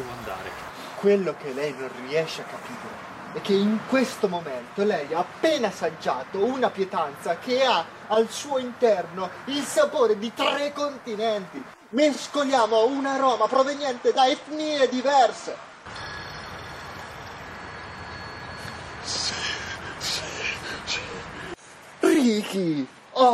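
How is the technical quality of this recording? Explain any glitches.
The recording has one fault: from 12.53 s to the end, an adaptive stream switches to a lower bitrate. Treble vanishes above 14.3 kHz and codec artefacts thicken abruptly without a gap, which fits a drop from 128 to 48 kbit/s MP3.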